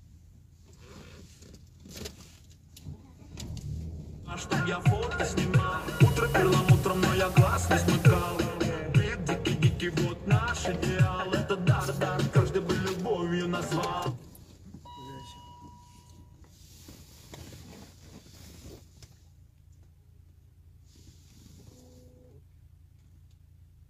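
Digital radio blending to analogue from 5.67 to 8.64 s. The receiver cross-fades to FM over 0.37 s. Hiss rises, about 20 dB below the signal, and level shifts about 3 dB.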